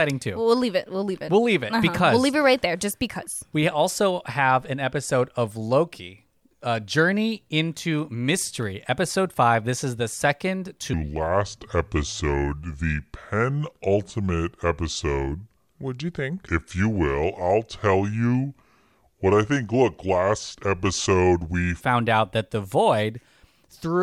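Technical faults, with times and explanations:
10.93–21.81 s, section at the wrong speed: likely played against the wrong clock at 0.706x speed, so the speech drops about seven semitones and drags slow and deep.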